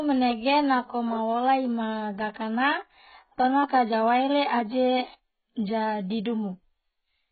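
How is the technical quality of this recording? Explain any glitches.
The recording is heavily degraded by compression from start to finish. AAC compression runs throughout: nothing survives above 4.6 kHz, and the dull, smeared, warbling speech is likely from AAC-LC, at a very low bitrate that fits roughly 12 kbps.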